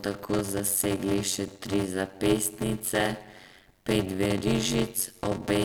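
Speech plays with a block size mismatch (padded) running through the whole clip: a steady buzz near 93.8 Hz sits under the sound, and delivery is slowed to 0.625 times normal speed while timbre stays. The next stage reads bigger blocks than are written, with the rest zero-filled, which fits 512-sample reads fed roughly 320-sample writes. The waveform shows regular flat gaps, and the spectrogram shows vertical striping with harmonics spaced at the buzz rate.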